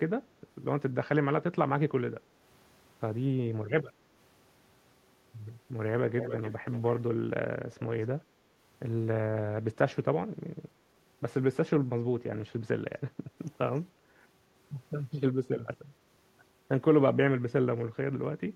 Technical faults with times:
6.19-7.02 echo leak

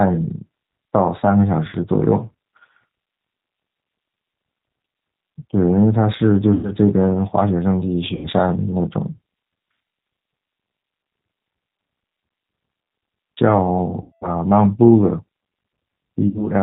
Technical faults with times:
0.00-16.62 G.729 codec
1.70-1.75 VoIP packet loss concealed by the speech codec
6.54-6.71 VoIP packet loss concealed by the speech codec
8.15-8.28 VoIP packet loss concealed by the speech codec
14.01-14.33 VoIP packet loss concealed by the speech codec
16.28-16.44 VoIP packet loss concealed by the speech codec

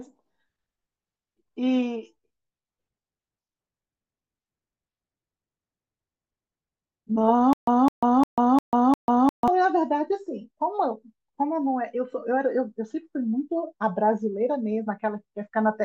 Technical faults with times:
7.53-9.48 stutter with silent gaps

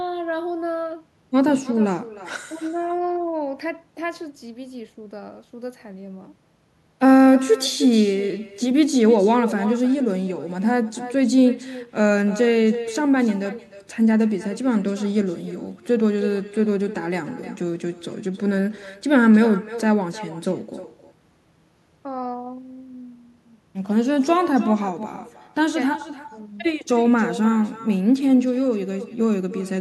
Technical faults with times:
0.00-29.80 echo with no canceller

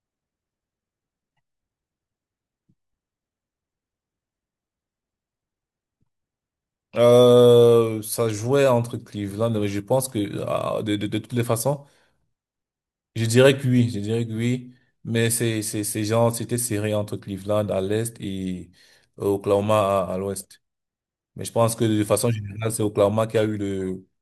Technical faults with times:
none

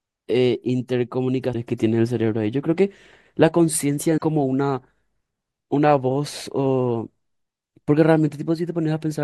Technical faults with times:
1.52-1.55 broken MP3 bit reservoir
4.17-4.21 broken MP3 bit reservoir

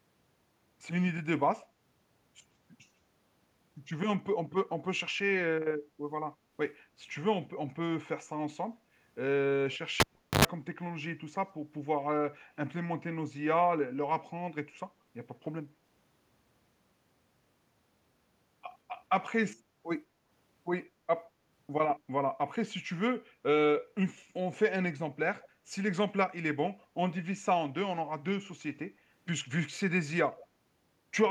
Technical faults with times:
10.00-10.45 cable pulled and plugged in
25.40-25.48 echo leak
28.44-28.48 echo leak
30.33-30.44 echo leak

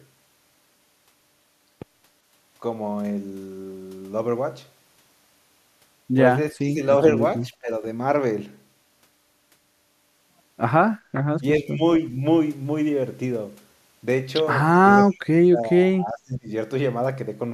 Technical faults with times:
6.52-6.81 speech suppressed in double talk
7.50-7.83 speech suppressed in double talk
11.40-11.82 speech suppressed in double talk
15.06-16.50 speech suppressed in double talk

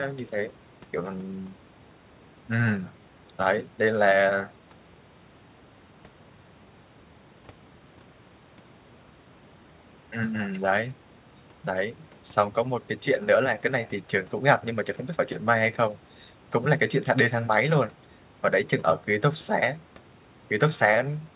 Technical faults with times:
none

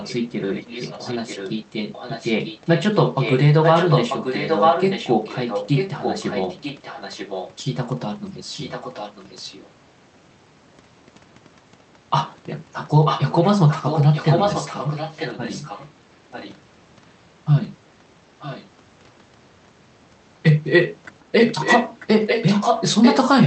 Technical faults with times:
0.03-7.54 echo leak
8.53-9.67 echo leak
13.05-15.92 echo leak
16.31-16.60 echo leak
18.39-18.69 echo leak
21.39-23.46 echo leak

